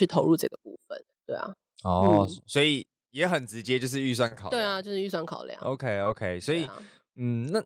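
Speech, carrying four kinds of technical fault. From 2.08 to 2.16 s the peaks break into a harsh, crackly edge, likely microphone overload: the input ran about 1 dB past the converter's limit, so a small share of sample tops were sheared flat. This differs from codec distortion because the roughness follows only the loudest moments. At 2.25 s the microphone volume steps down by about 4 dB in a single move, with the background noise falling along with the voice. That shared drop likely marks it as an input-gain change rather than the speaker moving away, and it comes right after the clipped peak. At 4.27 to 4.33 s and again at 6.04 to 6.08 s there is short concealed packet loss. About 20 ms of audio never arrived each time, and the receiver covered the hole by extending the preceding sound, for 35 ms and 20 ms respectively. The result is a brief smear before the real signal blends back in, and because content is actually missing, a short sound can vanish. 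At 6.66 to 6.69 s a short stall from a late packet holds the sound for 16 ms with a faint buzz or dip. The playback delay grows by 16 ms, but nothing is lost, which separates it from the concealed losses.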